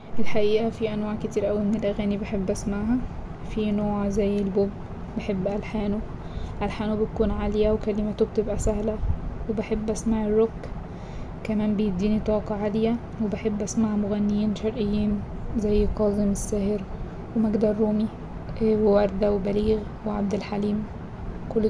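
No technical faults are audible anywhere in this speech.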